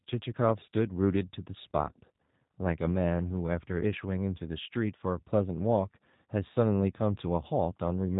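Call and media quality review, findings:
G.729 codec across the whole clip: speech rebuilt from filter, pitch predictor and sparse pulses at 8 kbit/s. Plainly rough, synthetic timbre, nothing above 3.8 kHz.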